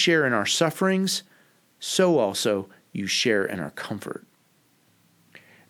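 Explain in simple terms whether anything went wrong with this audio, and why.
No faults can be heard.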